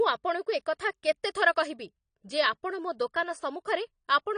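From start to finish the speech sounds dull and smeared, with nothing above about 10.1 kHz and a warbling, fizzy edge on sibilants and held sounds. The likely cause is AAC compression, with the damage plainly audible. The encoder, AAC-LC here, had too few bits per frame to code the full spectrum, so it lowered its cut-off and quantised the remaining bands coarsely. That coarse coding fits a low bitrate of around 32 kbps.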